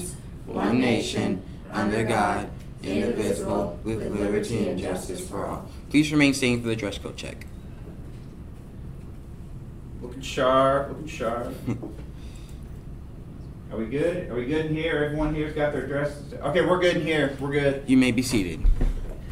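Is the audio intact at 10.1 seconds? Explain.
Yes, at 10.1 seconds the audio is intact, with no dropout, click, distortion or other technical fault at that point.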